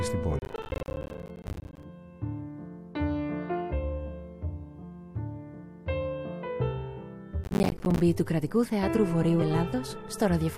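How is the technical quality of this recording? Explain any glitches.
The recording has two technical problems: bursts of crackle in two places and one brief jump near the end.

Processor overload crackle occurs from 0.39 to 1.83 s and again from 7.44 to 8.0 s. The processor failed to deliver its small audio buffers on time, which points to buffers of around 10 ms, and dozens of deadlines were missed in a row. Each miss dropped a short slice of silence with abrupt edges, so the sound is broken up by a gritty, tearing crackle that stops once the load eases.

Compressed frames were skipped at 9.41 s. Frames of the compressed stream never reached playback, either because they were missing or because the decoder rejected them as damaged. The audio therefore jumps forward by about 50 ms.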